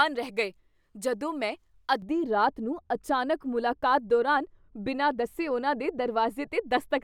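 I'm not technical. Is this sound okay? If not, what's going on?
No. From 2.02 s to the end, a de-emphasis error sets in: the system applied a treble-cutting filter meant to undo a boost that was either never there or already undone. The speech loses its crisp, bright top end, sounding dull and muffled, as if heard through a blanket.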